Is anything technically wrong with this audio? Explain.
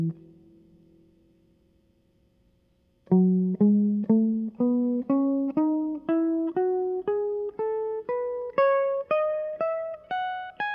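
No, nothing technically wrong turns up anywhere in this music clip.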